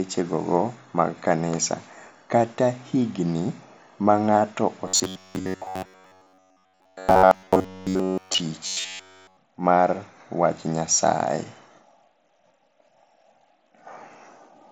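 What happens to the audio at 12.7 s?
Nothing goes wrong at 12.7 s; the speech carries on intact through that moment, still band-limited to about 8 kHz by the mSBC headset codec it passes through.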